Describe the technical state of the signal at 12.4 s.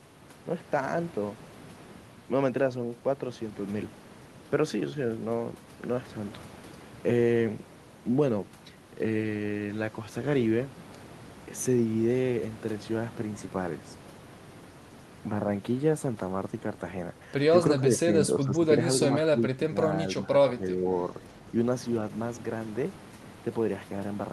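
At 12.4 s the signal is intact, with only the room's own background noise sitting about 17 dB below the speech.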